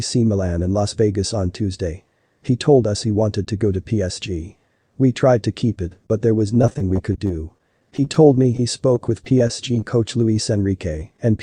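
From 6.54 to 8.59 s there is repeated packet loss, heard as robotic sound. Packets went missing or arrived late again and again. The receiver filled each hole by stretching the last bit of sound. About 217 ms was patched this way, roughly 11 percent of the stretch. No single hole runs past 18 ms, but they come in quick succession. The sound turns choppy, with small pieces missing.

From 8.95 to 11.19 s come scattered short gaps. Here packets were lost one at a time, spread out, not in runs. There are around fifteen holes, none longer than about 15 ms. Each was patched by continuing the previous sound, covering about 150 ms in all, around 7 percent of the span. The sound stays clearer than before. Brief ticks, small smears and hiccups break through at intervals.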